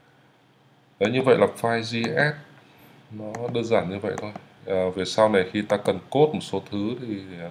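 No technical faults can be heard anywhere in the audio; the signal stays steady and intact throughout.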